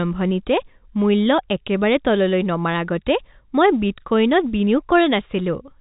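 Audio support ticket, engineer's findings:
No faults found: speech carried over G.711 telephone coding, band-limited with nothing above about 3.8 kHz, with any quantisation noise no more than faint and following the signal level.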